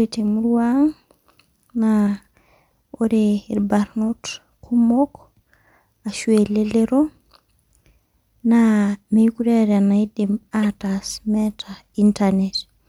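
At 10.63 s there's a quick glitch where a corrupt frame got decoded anyway: flipped bits scattered energy wrongly for roughly one frame, peaking around -15 dBFS.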